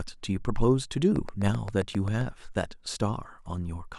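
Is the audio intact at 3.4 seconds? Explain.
Yes, the audio is intact at 3.4 seconds, with no fault at that moment.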